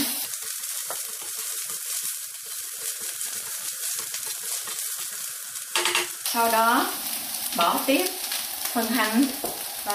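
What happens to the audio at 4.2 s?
At 4.2 s the audio is inside a train of clicks running from 3.27 to 4.47 s: about twenty similar pulses at roughly 16.8 per second, spaced unevenly, heard as ticking over the sound. The likely source is interference from nearby equipment or a faulty connection or power supply. On a waveform they show as sharp spikes standing about 5 dB above the signal; on a spectrogram, as thin vertical broadband lines.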